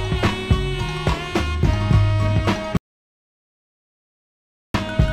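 At 2.77 s an audio dropout to silence cuts the sound dead until 4.74 s, likely a lost input. The waveform goes flat and the spectrogram nearly blank for nearly 2 s.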